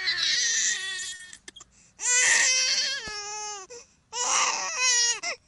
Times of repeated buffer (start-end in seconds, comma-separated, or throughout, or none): none